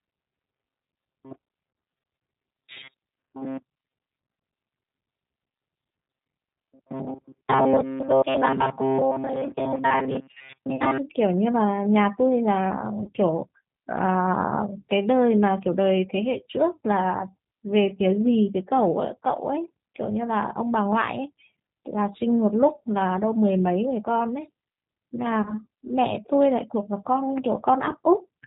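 This speech clip is rough, slightly synthetic and dull throughout, with nothing above 4 kHz. That is plainly audible G.729 codec damage, whose pulse-based rebuild of the voice from a vocal tract filter and pitch predictor fits an 8 kbit/s VoIP link. From the start to about 10.98 s the voice becomes a rigid metallic buzz fixed near 133 Hz, while still loosely tracking the speech. This is likely robotic sound from repeated short buffers: the software keeps replaying roughly 7.5 ms of audio and skips most of the real signal. At 10.76 to 10.82 s, 13.04 to 13.10 s and 25.42 to 25.54 s, the voice smears into a fading buzzy tone or coloured noise and stays weak or distorted briefly afterwards. This is VoIP packet loss concealed by the speech codec: about 30 ms went missing each time, which fits a single lost packet, and the decoder extrapolated from its last frame.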